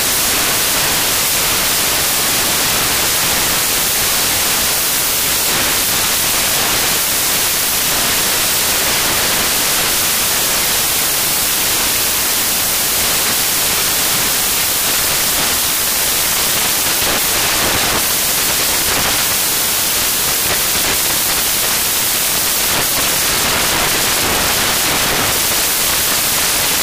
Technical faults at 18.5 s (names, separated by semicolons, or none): samples built from the wrong bytes